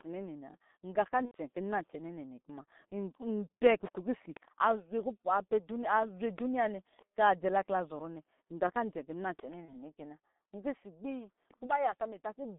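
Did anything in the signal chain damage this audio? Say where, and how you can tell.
Yes, at the codec stage. This is a G.723.1 codec running at about 6.3 kbit/s. The speech sits in a band from roughly 200 Hz to 3.7 kHz, so it's muffled and hoarse. The slow 30 ms frame updates smear consonants, and the damage is heavy throughout.

Then there's network trouble: VoIP packet loss concealed by the speech codec at 1.25–1.37 s, 9.66–9.75 s and 11.66–11.72 s. The first gap runs about 90 ms, which fits three lost 30 ms frames. The later two each fit a single frame. In each, the decoder stretches its last pitch and filter into a buzzy tone or coloured noise that fades.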